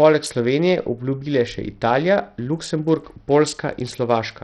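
From start to finish the speech has a dull, gritty quality: the upper treble drops out or flickers in and out, and a rough, grainy noise and aliasing cling to the sound. The likely cause is Bluetooth SBC compression at a very low bit pool. SBC splits audio into a handful of wide sub-bands without a hearing model, so the weak top bands get almost no bits and the rest are coarsely quantised. The heavy damage fits a rate around 64 kbps.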